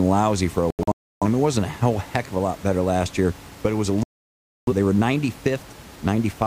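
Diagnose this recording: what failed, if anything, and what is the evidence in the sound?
A digital broadcast dropout at the reception stage, heard twice. After "lousy for a" the speech breaks into several muted holes from 0.70 to 1.26 s, totalling about 0.43 s with the longest near 0.3 s, before resuming at "it wasn't a whole". After "but it was a" it mutes from 4.03 to 4.73 s. The receiver silenced output while frames failed, and the gap lengths point to frames of roughly 43 ms. That audio is lost.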